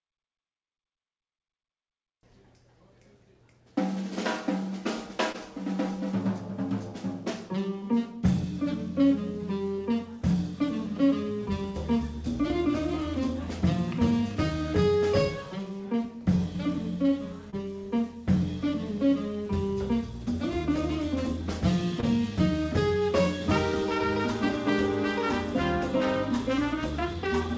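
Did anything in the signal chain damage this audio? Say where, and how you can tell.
Yes, at the network: short concealed packet loss at 5.32, 17.5 and 22.0 s. Each is a smear where the decoder stretched the preceding sound across a 20 ms gap.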